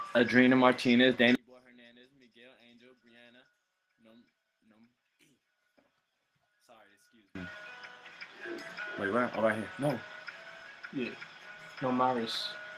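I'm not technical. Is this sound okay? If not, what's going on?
No. From 1.35 to 7.35 s the sound nearly disappears, likely because one channel is inverted, so the two stereo sides cancel each other when combined.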